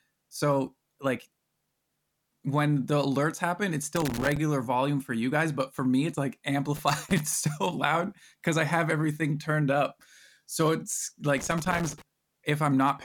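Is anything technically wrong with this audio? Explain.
Yes. This speech has loose connector crackle three times: 3.96 to 4.37 s, after "the alerts happen it's" and before "volume for you guys"; 6.76 to 7.20 s; and 11.37 to 12.02 s. A worn or dirty contact keeps breaking and remaking the circuit, chopping the signal. Each burst sounds like irregular scratchy crackling.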